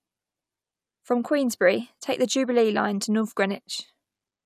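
A careful listen to this short speech recording turned up nothing that stood out as a technical problem.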